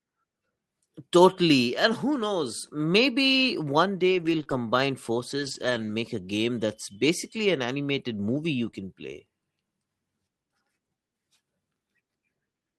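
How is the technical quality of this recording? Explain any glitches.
One fault stands out: scattered short gaps. From 4.11 to 8.75 s, about three tiny holes of 20 ms or less break the speech. Lost packets were patched by stretching the preceding sound, leaving brief ticks and smears.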